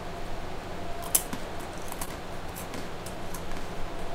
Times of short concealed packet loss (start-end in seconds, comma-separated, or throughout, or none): 2.05-2.09